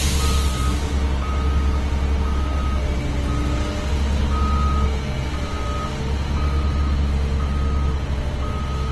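Opus compression runs throughout the clip. It is most likely the codec's music (CELT) mode working at a low rate, which fits a bitrate around 16 kbps. Short of bits, the encoder holds on to each band's overall energy but fills in much of the fine detail by folding lower bands upward or by inserting noise. As a result, tonal parts of the sound come across rough, grainy and noisy instead of clean, and this damage is plainly audible. Nothing remains above about 12.1 kHz.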